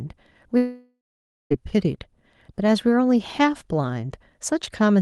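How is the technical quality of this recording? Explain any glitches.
One serious glitch: from 0.57 to 1.52 s the sound breaks off for almost a second, most likely a long network dropout. For about 0.94 s nothing new arrived. The receiver stretched the last fragment into a buzzy, fading tail, and the final half-second is near-silence before the sound resumes with that stretch simply missing. On a spectrogram, smeared, repetitive harmonics fade into a dark gap, and the waveform tapers to a flat line. Throughout, the call codec's upper limit appears as an empty band above roughly 12 kHz.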